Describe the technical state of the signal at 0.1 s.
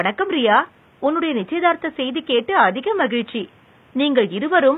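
HE-AAC compression is likely at 0.1 s and throughout: only the lower spectrum is coded, and the treble is rebuilt by copying lower bands upward, so s sounds turn gritty and lispy, fitting a bitrate near 20 kbps. Room noise sits about 34 dB below the speech.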